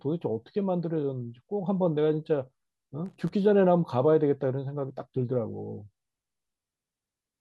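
A speech recording with loose connector crackle from 3.06 to 3.29 s: a worn contact making and breaking chops the signal into an irregular scratchy burst. The waveform shows jagged dropouts and sharp spikes, and the spectrogram shows ragged broadband vertical streaks across that quarter-second.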